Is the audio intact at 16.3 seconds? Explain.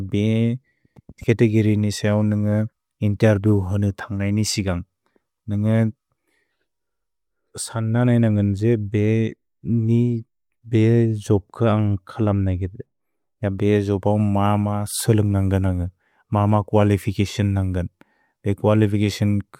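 Yes, the speech at 16.3 seconds plays through cleanly, with no audible fault at that moment.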